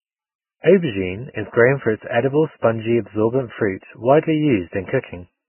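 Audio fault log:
Throughout: Vorbis compression, heavy; nothing above 3 kHz, treble turned to grainy hiss rather than plain dullness, likely from a very low bitrate near 9 kbps.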